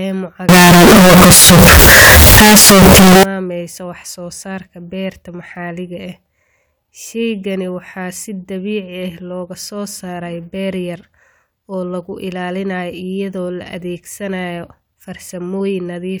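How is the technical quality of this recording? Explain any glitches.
The recording has one serious fault near the start. From 0.49 to 3.23 s the speech turns into very loud, harsh distortion, with quiet moments blaring as loudly as the rest. The likely cause is signed and unsigned mixed up in the 16-bit samples: flipping the top bit turns every zero crossing into a full-range jump.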